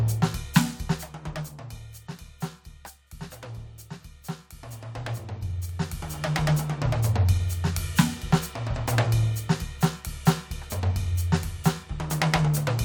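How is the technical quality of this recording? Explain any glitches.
No glitches can be heard anywhere in this music recording. The level moves smoothly in places, as if a fader were being eased down or up, and each change is gradual.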